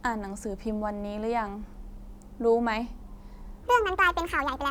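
From 3.63 s to the end of the clip at 4.70 s, the speech plays as a section at the wrong speed, running 1.6 times faster than normal. Pitch rises with tempo, by about seven semitones, so the voice turns high and hurried for this final stretch. Because speed and pitch move together, the likely cause is this segment being played back or resampled against the wrong clock rather than a deliberate pitch shift.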